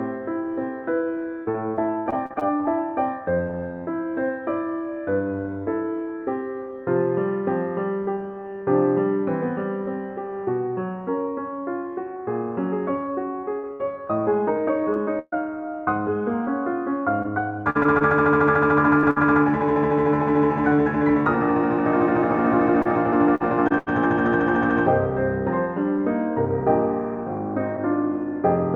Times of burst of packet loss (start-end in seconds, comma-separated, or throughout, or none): 19.11-19.18